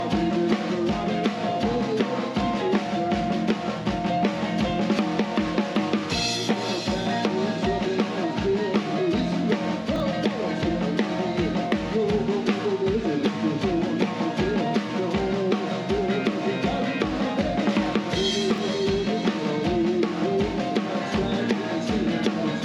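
At 9.96 s there's a brief scramble of chunks out of order: one 20 ms chunk turns up a single slot late, so two neighbouring pieces swap places through 10.0 s. Nothing goes missing, but the sound jumps backward and forward, leaving three hard joins heard as a tiny jumbled moment. The same thing happens again from 18.54 to 18.58 s, another 20 ms chunk arriving one slot late.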